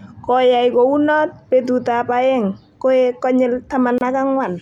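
At 3.98 s the speech breaks into a silence of about 28 ms, ending at 4.01 s: a gap at a join of encoded pieces, which fits sections about 4 s long, each encoded separately, with the encoder's start-up delay and last-frame padding left in at the join. The edges are smeared, and unlike a dropout, the speech resumes exactly where it stopped, with nothing missing.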